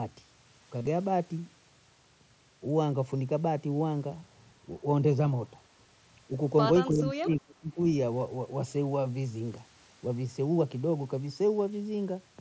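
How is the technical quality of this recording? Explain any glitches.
The recording has two audible glitches, heard through a wideband headset link that stops at 8 kHz and adds a light grain on louder speech.

From 0.79 to 0.87 s the speech turns briefly buzzy and tonal, then warbles as normal sound returns. This is concealed Bluetooth headset packet loss. About 52 ms of audio went missing across 75 ms, with the longest gap 30 ms. The receiver filled the gaps by repeating the closest-matching recent waveform, which gives the held, buzzy quality.

From 6.9 to 7.79 s the talker's level sinks in patches, by roughly 30 dB at the deepest, across about 0.7 s in total. The likely cause is speech suppressed in double talk: with both parties speaking at once, the echo canceller couldn't tell this voice from loudspeaker echo and turned it down.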